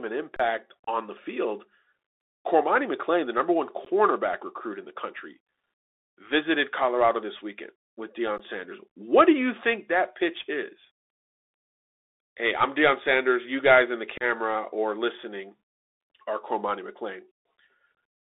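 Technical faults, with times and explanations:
Throughout: Bluetooth CVSD headset codec. The speech is confined to a telephone band of roughly 300 Hz to 3.7 kHz, and the one-bit-per-sample 64 kHz coding cannot track fast, loud changes. Sibilants turn scratchy and a granular hiss sits under the voice, unlike the brief holes below, which come and go.
0.36–0.40 s and 8.38–8.40 s: underrun with held sample. The output buffer ran dry for about 32 ms and then about 16 ms, after "this weekend with". The converter froze on its last value, so the waveform flattens rather than dropping to silence, and live audio was skipped meanwhile.
0.84–0.89 s, 3.85–3.87 s, 14.18–14.23 s and 17.97 s: unconcealed Bluetooth headset packet loss. Short runs of headset voice packets never arrived. The losses were 30 ms before "the field", 15 ms, 30 ms between "guys in the" and "or listening", and 22.5 ms, which fits a few packets each time. 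Silence or an idle pattern filled the holes, leaving abrupt-edged gaps, and the speech returns briefly quieter as the CVSD step size rebuilds. A held-sample underrun freezes the level instead of emptying it.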